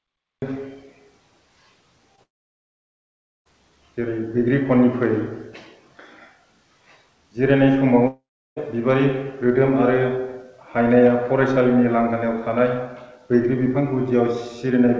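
The audio opens with a cut-off start. Digital silence runs to 0.42 s, where the sound begins abruptly mid-event with no attack or fade. On a waveform this is a flat line that jumps straight into the sound, and the spectrogram shows a hard vertical edge.

At 2.16 to 2.20 s, a short concealed packet loss replaces about 20 ms that never arrived with a continuation of the preceding sound. It is heard as a brief smear or wobble. The spectrogram shows a slightly blurred, repeated-looking sliver where the fine detail breaks before rejoining.

From 2.24 to 3.47 s comes a long network dropout, likely caused by packets failing to arrive for over a second. The last sound carries on briefly as a fading buzz, then about 1.19 s of silence follows before the audio resumes, with that stretch simply missing. The waveform shows a short decaying tail and then a flat gap. The spectrogram shows smeared, fading bands followed by an empty column up to the 8 kHz ceiling of the call path.

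A second long network dropout runs from 8.07 to 8.58 s, with about half a second missing. Here the concealment tail is longer relative to the gap, and it is followed by about 0.35 s of silence. This looks like a smaller version of the first gap: a decaying smear, then a blank stretch, then the audio resumes.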